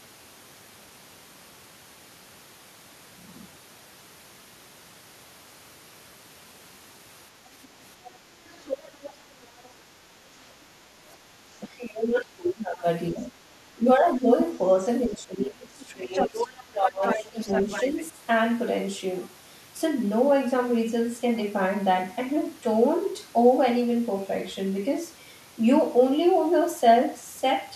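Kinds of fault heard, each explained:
Other side's voice leaking through: the echo canceller likely left part of the loudspeaker playback in the microphone signal, so a second voice slips in. It starts as faint scraps near 7.6 and 8.0 s, grows louder from 8.48 to 9.68 s, and is almost level with the talker from 15.82 to 18.04 s.
Speech suppressed in double talk: with both sides talking at once, the echo canceller likely could not tell the talker from the echo and turned both down. The voice dips by up to about 20 dB from 11.63 to 13.32 s, 13.75 to 14.28 s and 15.1 to 18.16 s.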